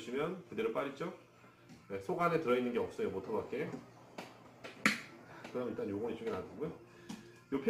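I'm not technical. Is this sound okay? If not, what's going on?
No. From start to finish there's a faint hiss or roughness riding on the sound, growing stronger where it is loud or bright and fading away in the quiet moments. This is sample clock jitter. The timer that decides exactly when each tiny slice of sound gets measured is wobbling by a few millionths of a second. Fast-changing parts of the sound suffer most from those slightly mistimed slices, so they come out gritty.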